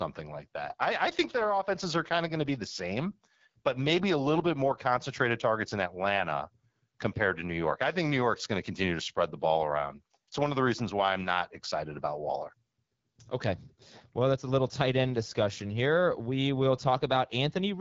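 From start to finish the speech carries AMR wideband (HD Voice) codec damage, plainly audible as a rough, raspy edge, which fits one of the codec's lowest modes, around 8.85 kbit/s. A spectrogram shows nothing above 7.5 kHz, and the top band looks like smeared noise.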